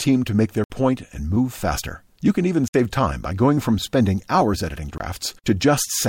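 Blocks of digital silence at 0.64–0.70, 2.68–2.74 and 4.98–5.00 s cut the speech abruptly to silence, pointing to late output-buffer fills.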